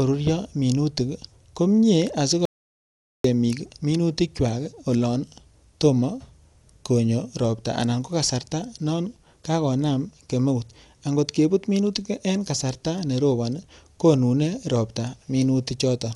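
From start to finish the speech sounds dull and boxed in, with nothing above about 11.4 kHz and a rough, fluttering grain around the voiced sounds. That points to Dolby Digital compression at a starved bitrate, likely near 64 kbps. At that rate the encoder trims the top of the band and leaves many frequency lines with no detail bits. The decoder fills those gaps with noise, which gives the voice its gritty, wavering texture.

At 2.45 s the speech cuts off abruptly. It stays completely silent until 3.24 s, a gap of about 0.79 s with no room tone underneath, and then resumes mid-flow. This is an audio dropout to silence, likely caused by the input being lost briefly while recording continued and wrote silence. Whatever was said during that stretch is missing entirely.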